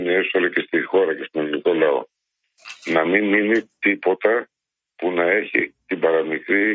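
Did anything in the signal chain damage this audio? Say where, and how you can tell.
Yes. The call-processing stage's noise suppressor misjudged part of the signal as noise and clamped down on it. Between 2.44 and 2.85 s, the sound sinks noticeably below its surroundings, falling by about 18 dB at its deepest, with roughly a fifth of a second audibly thinned out. The gain reduction flattens sustained energy and clips tails short, so the level dips unnaturally there while the call processing's 8 kHz bandwidth limit stays unchanged.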